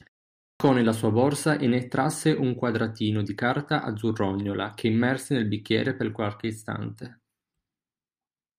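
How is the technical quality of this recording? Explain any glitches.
The recording has one glitch, a clipped start after a pause. At 0.35 s, after a 0.35 s silence, the playback device wakes too slowly and swallows about 250 ms, so "nella sua borsa e" begins abruptly without its opening sounds.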